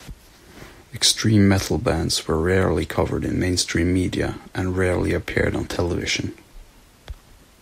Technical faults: none

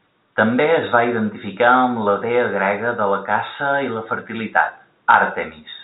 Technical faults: none

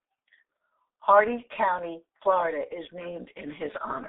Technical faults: G.723.1 codec

